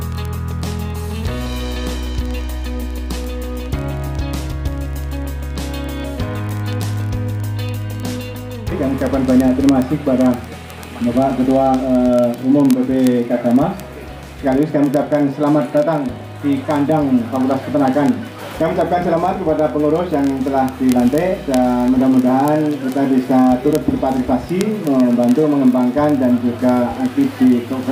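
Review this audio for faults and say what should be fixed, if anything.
Word clock ticks run from 0.12 s to the end, roughly every 30 ms, as the receiver's free-running clock slips one sample against the sender's. Lock the receiving device to the source's word clock.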